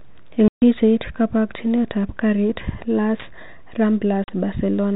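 Packet loss filled with silence leaves flat waveform gaps at 0.48–0.62 s, before "kabokchinet ab garit", and 4.24–4.28 s. Their edges are hard, and the lengths fit 20 ms packets.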